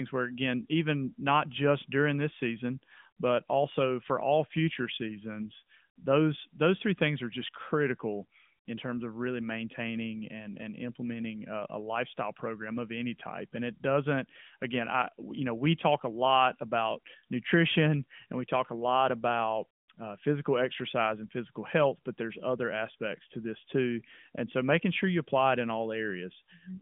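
No technical faults are audible.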